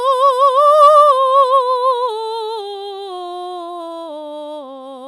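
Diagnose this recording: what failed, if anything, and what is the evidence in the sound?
Hard clipping is the failure, between 0.82 and 1.01 s in this music, at a gain or conversion stage where the level exceeded full scale by about 1 dB. The peaks were cut flat, so there is a brief crackle only on the loudest moments of that passage, not a continuous fuzz. That distinguishes it from analogue saturation, whose rounded tops give a smoother, broader warmth. The squared tops add high harmonics that appear as a short, gritty edge.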